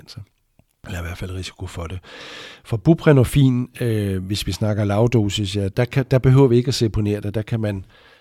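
No technical faults are audible anywhere in the speech.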